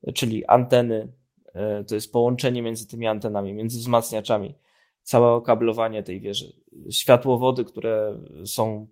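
No technical faults can be heard in this speech recording.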